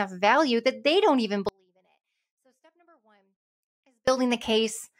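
Speech, with an audio dropout to a faint residue: the signal path likely lost its feed from 1.49 to 4.08 s, leaving roughly 2.6 s of faint leakage around 35 dB down before the sound abruptly returns.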